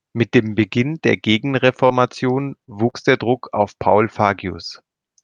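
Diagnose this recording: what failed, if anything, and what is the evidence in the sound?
Network's the culprit here. Between 1.67 and 2.95 s the speech picks up a few brief hiccups and smears, about three separate ones, the longest only around 40 ms. That's the scattered short gaps pattern: packets dropped or arrived too late, one here and one there, about 80 ms of audio in all. The receiver papered over each hole by stretching the last bit of sound, rebuilding about 120 ms, so it stays clear but ticks and smudges briefly.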